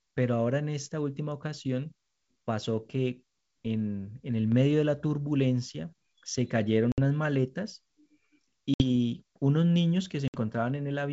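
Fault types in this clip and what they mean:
Packet loss on an ADPCM call: three hard-edged 60 ms silences, after which speech returns briefly slightly distorted as the decoder's predictor catches up, unlike a clean dropout.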